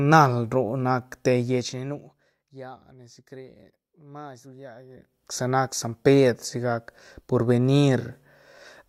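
A speech clip in which a fine ticking, zipping rasp rides on the sound twice: from 1.41 to 2.50 s, while the level drops by roughly 20 dB, and from 4.86 to 5.29 s, as it climbs back by roughly 20 dB just before "sa nac san". This is zipper noise. The gain moves in discrete jumps, about 1 dB each on the rise, around 50 times a second, with no smoothing, and every jump leaves a small click.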